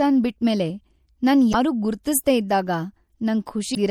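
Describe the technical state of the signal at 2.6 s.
MP3 compression is audible at 2.6 s, as it is throughout the clip: weak frequency lines flicker between frames, giving a watery, swirly sound and smeared attacks, likely from an encoding of around 64 kbps.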